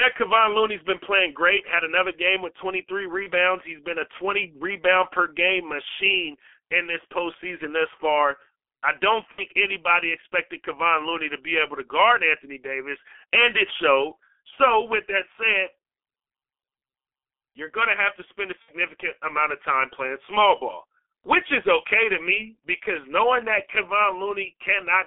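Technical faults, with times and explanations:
Throughout: G.723.1 codec. The speech is confined to a telephone band of about 300 Hz to 3.4 kHz and is heavily damaged by a very low-rate coder, which fits a G.723.1 stream at about 6.3 kbit/s. The coder rebuilds the voice from a coarse model refreshed only once per 30 ms frame, so the sound is muffled and hoarse, and quick consonant transitions smear together.
3.23–3.28 s, 9.32–9.43 s and 18.62–18.73 s: VoIP packet loss concealed by the speech codec. The first gap covers 30 ms and the other two cover 60 ms each, which fits one and then two lost frames. At each gap the decoder keeps repeating its last pitch and spectral shape at falling gain, so the speech turns into a brief, fading smear. Because each frame builds on the one before, the voice stays weak or rough for a short time after the audio resumes.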